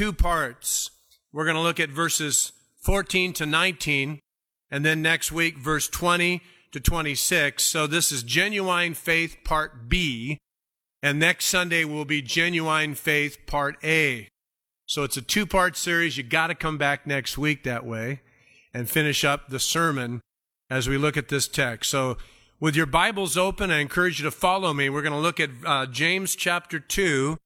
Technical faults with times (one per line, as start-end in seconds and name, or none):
none